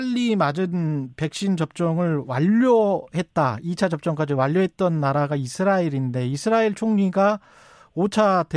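No technical faults can be heard anywhere in the recording. There are no events to place in time order.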